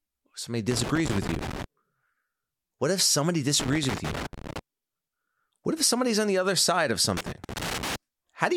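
Loose connector crackle breaks into the speech three times: from 0.71 to 1.64 s, from 3.60 to 4.59 s just after "if somebody", and from 7.17 to 7.96 s after "the other side of". A worn or dirty contact is making and breaking as it shifts, chopping the signal into an irregular scratchy rasp. On a waveform the signal shows jagged dropouts and spikes, and a spectrogram shows scattered broadband vertical streaks.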